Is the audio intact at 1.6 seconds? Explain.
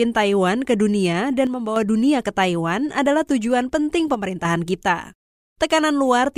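No. From 1.47 to 1.76 s one channel drops out, likely because one stereo side went silent. The mono-summed speech dips abruptly by about 6 dB, so the waveform shows a sudden step down in amplitude and the spectrogram a uniformly dimmer band, edges sharp.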